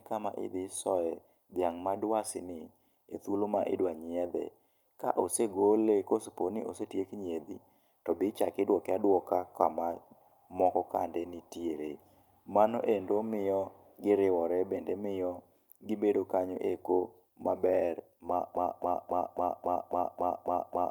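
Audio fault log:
18.56 to 20.90 s, broken-record loop: from 18.56 s to the end of the clip, the speech becomes a single 273 ms fragment repeating exactly, back to back. The player or stream likely stalled and kept resending its last held piece, so the speech due there never plays.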